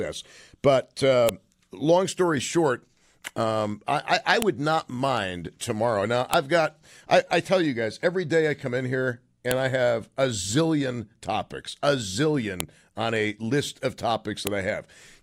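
Six sharp snaps cut through this speech, at 1.29, 4.42, 6.34, 9.51, 12.60 and 14.47 s: the first lands just before "long story short um", the second between "short um I I" and "not mind tomorrow", the third right before "got I I tell". It's a file header played as audio. The pieces were joined with their WAV headers left in, so those bytes come out as a brief, loud click at every seam, regardless of what the speech is doing.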